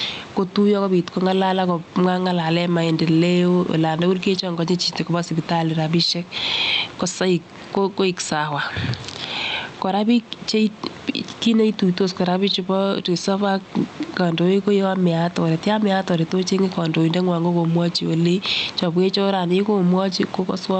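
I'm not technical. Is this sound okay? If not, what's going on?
No. This is gain pumping, heard from start to finish. The microphone level is likely set far too high, so an automatic limiter keeps pulling it down on every loud sound. Loud and soft parts end up closer in level, and everything sounds squashed.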